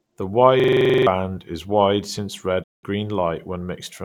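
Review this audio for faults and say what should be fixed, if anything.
A system hang loop runs from 0.60 to 1.07 s. The computer or driver stalled while the audio hardware kept replaying the same stretch of its ring buffer, so one chunk of about 43 ms of speech repeats eleven times. That repetition rate of 23.4 Hz comes across as a rapid, rough stutter rather than a smooth tone. The loop length fits a 2048-sample buffer, and roughly half a second of real audio is missing before the speech resumes on "is wide since". To prevent it, the audio thread needs enough priority and headroom, with a watchdog that mutes output if the buffer stops being refilled.

A digital broadcast dropout follows from 2.62 to 2.85 s, right after "is wide since". The receiver lost the signal or rejected corrupted frames and muted until clean data returned. The speech fades out over about 20 ms and leaves a 192 ms silent hole, a gap consistent with a short run of frames being discarded. 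What was transmitted during that gap is gone, and the audio picks up again mid-stream. Stronger error protection or a better reception margin would keep frames from failing and the receiver from muting.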